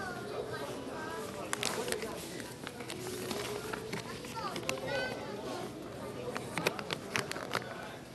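Throughout, the sound is dull and gurgling, likely from MP2 compression near 80 kbps; the spectrogram shows flickering upper bands and nothing above 12.2 kHz.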